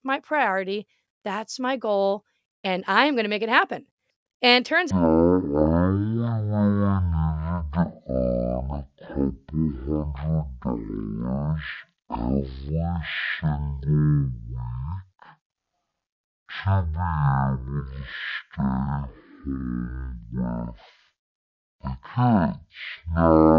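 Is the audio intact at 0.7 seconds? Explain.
Yes, at 0.7 seconds the speech is intact, with no dropout, click, distortion or other fault audible at that point.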